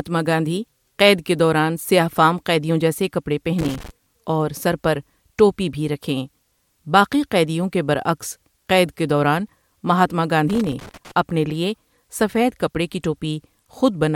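A worn or dirty contact is making and breaking, so the speech signal is chopped into irregular loose connector crackle and scratching. It occurs from 3.59 to 3.91 s, after "فام قیدیوں جیسے کپڑے", and from 10.50 to 11.11 s, before "اپنے لیے سفید کپڑے".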